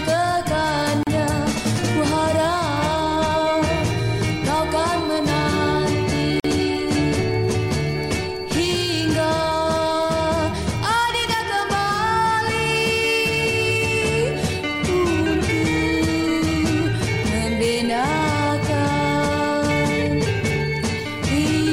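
Separately encoded pieces were joined without trimming each run's start delay and last-frame padding, leaving a gap at the join of encoded pieces: a gap of about 36 ms at 1.03 to 1.07 s and about 46 ms at 6.40 to 6.44 s, each with smeared edges before the sound resumes where it stopped.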